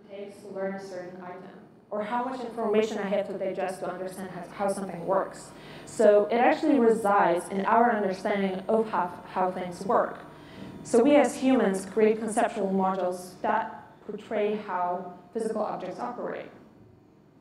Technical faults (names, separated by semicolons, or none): channel delay (doubling)